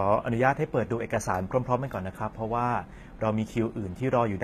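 Throughout, the treble sounds bright but synthetic, with gritty, lispy s sounds up to a 14.9 kHz ceiling, likely HE-AAC compression rebuilding highs by band replication at about 20 kbps, unlike a dull plain low-pass.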